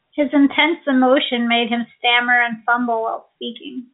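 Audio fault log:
The speech runs through G.711 telephone coding with nothing above 3.8 kHz, a band limit and level-following grain that fit 64 kbps A-law, and no faults can be heard.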